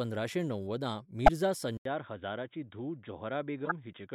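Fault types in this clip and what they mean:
Corrupt frame decoded: damaged compressed frames were played anyway, misplacing energy across frequencies and producing short noisy blips at 1.26 s and 3.65 s.
Input switched to a poorer device: a likely input change leaves an 80 ms gap at 1.77 s, after which sound turns dull, capped at 3.8 kHz, about 5 dB quieter.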